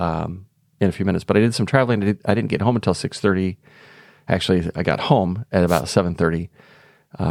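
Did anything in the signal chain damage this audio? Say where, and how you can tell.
Yes. A wireless microphone noise hit from 5.67 to 5.82 s gives a brief burst of static. The analogue FM radio link faded as reflections cancelled, so receiver noise rose.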